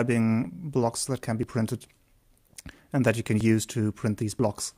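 The sound skips abruptly at 0.45, 1.43, 3.41 and 4.39 s. Each time a very short slice, around 15 ms, vanishes and the two sides butt together with no gap, giving a small jump in continuity. The skips falling on a one-second grid point to audio missing between chunks: the capture or processing chain likely works in one-second blocks and drops a sliver of sound each time it closes one block and starts the next.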